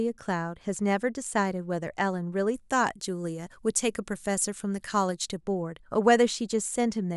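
From 2.54 s to 5.41 s the speech turns thin, bright and hissy with sibilance, the mark of pre-emphasis left on. The treble lift that fits a 50-microsecond FM curve was applied but never undone, leaving 10 kHz about 11 dB hot relative to 1 kHz. Unlike an arbitrary treble shelf, the boost rises steadily from around 3 kHz, following that fixed time-constant slope.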